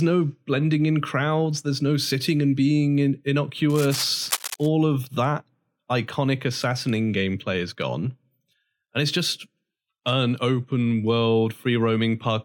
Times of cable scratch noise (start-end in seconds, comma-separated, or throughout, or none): 3.69-4.68